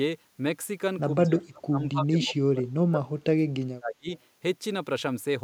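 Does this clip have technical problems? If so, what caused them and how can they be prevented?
Yes. From 1.26 to 4.08 s the speech is pulled down hard, as far as roughly 40 dB at its deepest. This is speech suppressed in double talk. Both ends likely talked at once, and the echo canceller treated this talker as echo. Better double-talk detection, or a headset at this end, prevents it.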